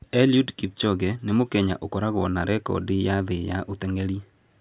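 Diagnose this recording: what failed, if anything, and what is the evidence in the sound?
Nothing failed here that I can hear: the speech comes through steady and intact at every stage from capture to playback, with nothing in the sound pointing to a problem.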